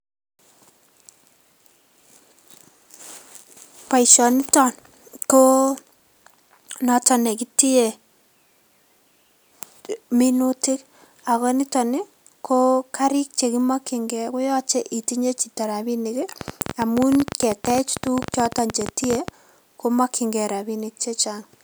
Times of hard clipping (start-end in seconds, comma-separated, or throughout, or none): 4.11-4.16, 17.35